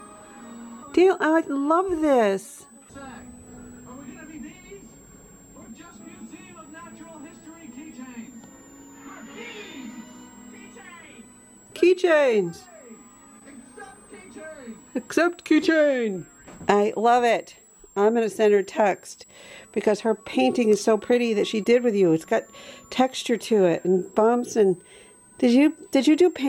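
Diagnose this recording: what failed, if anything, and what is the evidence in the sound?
What failed is in the analogue side: a switching supply whistle runs through the whole recording. You can hear a thin, high tone riding under everything, wandering between about 7.1 and 8.3 kHz and sitting somewhere around 35 dB below the sound. That pitch drift is the giveaway. A switch-mode supply is running in an audible burst mode or beating with another one, and its switching rate shifts as the load moves, so the whistle leaks into the analogue path.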